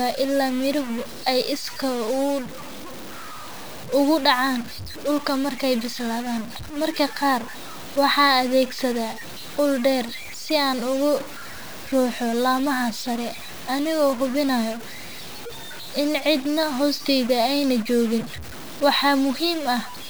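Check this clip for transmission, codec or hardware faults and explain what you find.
There is one hardware fault, a stuck bit, running through the whole speech clip. About half of the samples are pushed off by a fixed step of about -30 dBFS, likely from a bit held at one value. The speech sounds harsh and buzzy, and pauses fill with steady noise.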